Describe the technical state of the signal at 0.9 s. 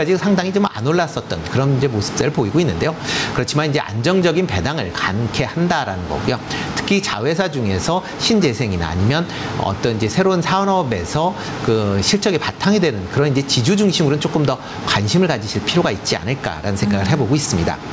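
At 0.9 s there is gain pumping, as throughout the clip. The gain swings by about 15 dB, pulled down on each loud sound, likely by a fast limiter reining in excessive gain. Unlike a noise gate, it squashes loud and soft parts closer together rather than silencing the gaps.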